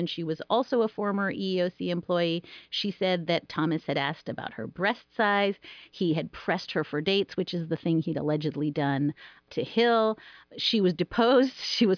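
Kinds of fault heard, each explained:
No technical faults can be heard in this recording.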